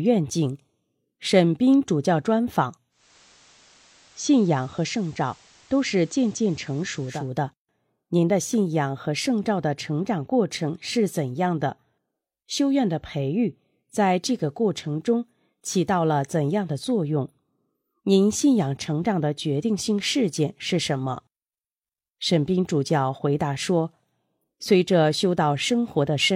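From 2.90 to 7.33 s, the receiver lost its digital signal and, in a case of digital radio blending to analogue, cross-faded over about 280 ms to the station's FM broadcast and later back. In between, the audio drops about 2 dB and carries hiss roughly 30 dB down.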